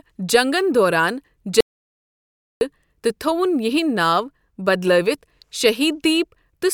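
At 1.61 s the speech cuts out abruptly and returns at 2.61 s, an audio dropout to silence lasting about one second. The gap is dead digital silence with no room tone, which likely means the input was lost while the recorder kept writing silence. Whatever was said in that second is gone. On a waveform it shows as a flat line between hard edges. On a spectrogram it is an empty black band across all frequencies.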